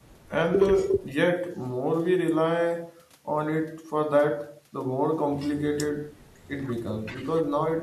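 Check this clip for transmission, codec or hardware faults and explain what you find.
No faults detected in this clip.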